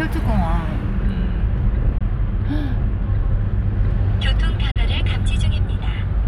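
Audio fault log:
1.98 s and 4.71 s, Bluetooth dropout: the sound cuts to silence for about 20 ms, then about 40 ms, and comes back further along, as if it had kept playing. That's likely one and then two wireless packets arriving late and getting dropped.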